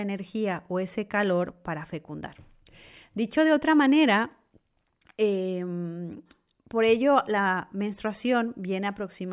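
No technical faults are audible.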